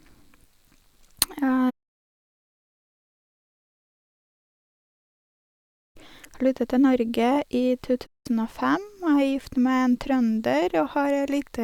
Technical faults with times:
8.06-8.26 playback stall

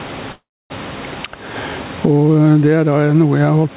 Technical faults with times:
0.00-3.76 gain pumping
0.32-0.72 call audio freeze

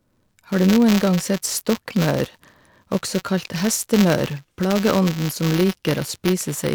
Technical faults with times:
0.00-6.75 buffer tearing

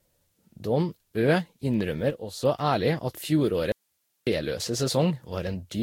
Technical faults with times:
0.00-5.83 generation loss
2.10-2.43 sudden gain jump
3.72-4.27 audio dropout to a faint residue

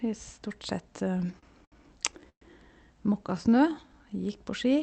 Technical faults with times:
1.13-1.74 repeated stalls (stutter)
2.29-2.43 call audio freeze
3.24-4.38 jitter buffer slow-down

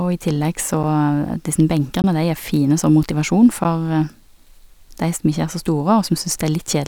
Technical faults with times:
0.83 block of digital silence
2.02 block of digital silence
3.64 block of digital silence

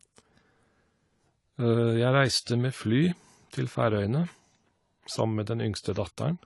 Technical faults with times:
0.00-6.46 AAC compression

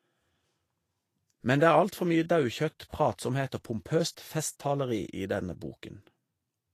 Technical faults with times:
0.00-6.74 Vorbis compression

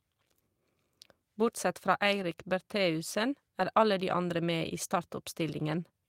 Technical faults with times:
none

